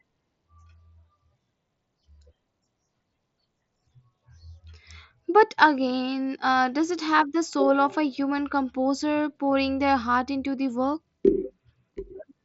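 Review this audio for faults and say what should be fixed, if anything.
No faults; nothing needs fixing.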